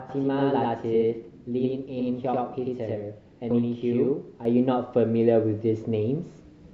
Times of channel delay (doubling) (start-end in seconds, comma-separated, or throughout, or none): 0.00-4.45